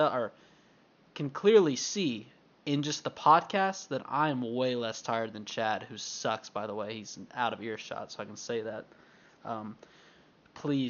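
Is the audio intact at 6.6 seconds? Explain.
Yes, the speech at 6.6 seconds is intact, with only the room's own background noise, about 33 dB below the speech, present beneath it.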